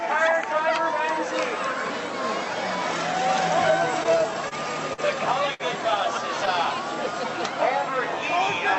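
From 4.03 to 4.53 s there is repeated stalling, a stutter. Packets kept arriving late, and the jitter buffer ran dry four times. Each gap was bridged by extending the preceding sound, about 60 ms in all, the longest 28 ms. Nothing drops out, but the sound drags and hiccups.

Two short stalls from a late packet follow, at 4.93 to 5.00 s and 5.54 to 5.62 s. Each time one packet came in late. The receiver held the last sound for 45 ms, then 56 ms, before resuming where it left off. Each gives a brief smeared hold with a slight buzz or dip. The audio is band-limited to about 8 kHz, which fits an Opus call codec running at a moderate bitrate.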